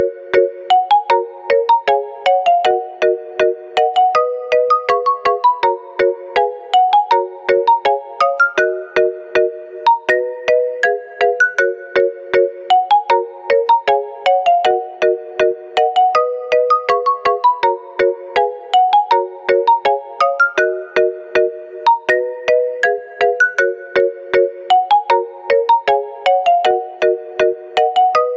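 Gain pumping runs through the whole clip. The gain swings by roughly 15 dB. Loud and soft parts sit squashed together. The likely cause is input gain set far too high, with a fast limiter pulling it back down. The call microphone processing leaves nothing above 8 kHz.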